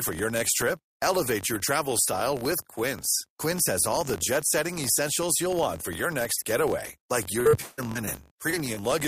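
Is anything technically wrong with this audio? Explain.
Yes, there are two problems.

The first is a filter restarted on every block, and it runs through the whole speech clip. The filter drops its memory at each block boundary and starts from silence, so every block opens with a tiny transient. Those ticks repeat at about 47 Hz, which fits a 1024-sample buffer, and you hear them as a low buzz under the speech that gets louder and quieter with the signal.

The second is repeated packet loss (robotic sound), from 7.39 to 8.84 s. Chunks of audio went missing about ten times in that stretch. Each hole got filled by stretching out the last bit of sound, with the longest hole about 165 ms. About a third of that span is patched-in sound rather than real audio, so it comes out choppy, with bits of speech missing.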